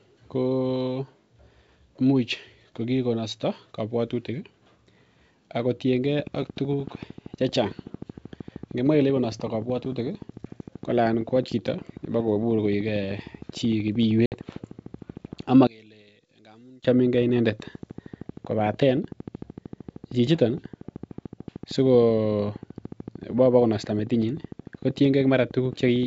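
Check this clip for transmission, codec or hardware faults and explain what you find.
There are three separate problems here: a long run of clicks, one short dropout on the call path, and a brief stretch where the mono sum nearly collapses. The G.722 wideband coding at 64 kbit/s underneath shows only faint damage, if any.

Train of clicks, from 6.2 s to 26.0 s: a steady ticking at about 13.2 clicks per second, roughly 300 in all, each peaking at roughly the same level as the speech. The spacing is regular and it carries on through pauses, so this is likely outside interference or a faulty connection or power supply.

Packet loss on an ADPCM call, 14.26 to 14.37 s: 60 ms drop out to hard silence, which fits about three lost packets. The ADPCM decoder's predictor and step size lose track of the sender during the gap, so the speech comes back slightly distorted before it settles.

One channel inverted, 15.67 to 16.85 s: the level drops by about 29 dB and only a faint residue is left. 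That is most likely one stereo channel flipped in polarity, so the centred speech cancels itself out when the two channels are summed to mono.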